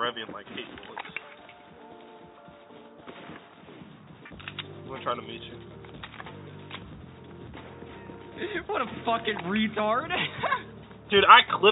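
Nothing here stands out as a technical fault; the audio just runs along without any glitch, dropout or break to point to.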